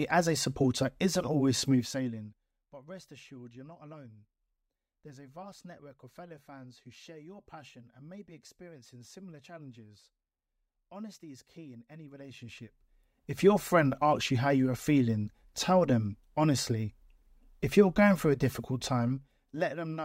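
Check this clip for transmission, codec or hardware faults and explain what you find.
One fault stands out. Zipper noise, 1.62 to 2.60 s, after "a supporter isn't always": the level drops roughly 20 dB in unsmoothed steps, around 50 a second, so the sound ticks audibly until "but rest assured you're".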